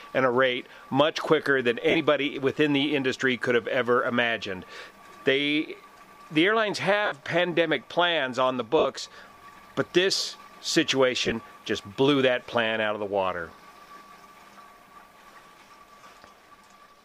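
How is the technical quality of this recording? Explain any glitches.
Five brief glitches mar the recording, all from lost LE Audio frames, at 1.90, 7.05, 8.79, 11.25 and 16.00 s. The gaps last about 45, 60, 60, 37.5 and 45 ms respectively. The last two are broken up rather than continuous, spread over 60 ms in short runs. When frames go missing, the LC3 decoder conceals the hole by replaying the last good spectrum with randomised signs and fading it down. Tonal content in each gap therefore turns into a short, noisy smear instead of a clean cut. The gap lengths fit a 7.5 ms frame size.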